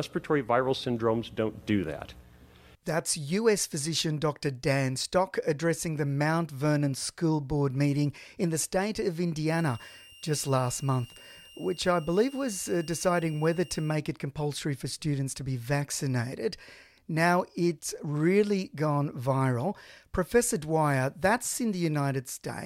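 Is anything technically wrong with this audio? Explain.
Yes. From 9.50 to 13.95 s a switching supply whistle is audible. A switching power supply in the recording chain is cycling at an audible rate, in a burst mode or beating against another supply, and leaking that energy into the signal. The result is a thin, steady high whistle sitting between 2.77 and 2.83 kHz, wandering slightly within that band, at about 25 dB below the speech.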